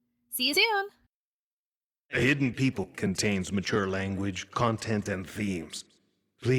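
Compressed frames skipped, four times: 0.53 to 0.59 s, 2.83 s just before "contains mature", 4.40 s just before "content and", and 5.62 to 5.65 s right after it. Whole 10 ms frames go missing, about 20 to 100 ms each time, and each time the speech jumps ahead by that much.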